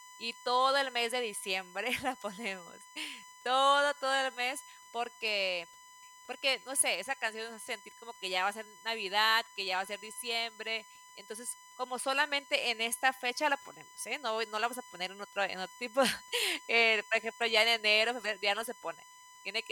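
A USB whine runs throughout the speech at a fixed 1 kHz, well below the voice. The bus's 1 ms frames draw current that leaks into the audio path.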